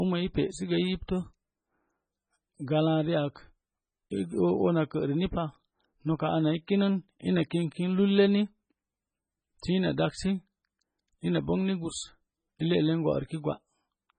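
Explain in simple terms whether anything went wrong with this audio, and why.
The whole recording has a thin, watery quality, with nothing above about 9 kHz, so the s sounds turn dull and swirly. That's MP3 compression, likely squeezed very hard: when the encoder runs short of data, it cuts the treble and drops quieter detail.

At 6.67 s, right after "noka ana i", a quick attack gets a short hiss just ahead of it and sounds smeared. That's pre-echo. The compression spreads its noise over a short block, so the noise leaks into the quiet moment before the sound starts.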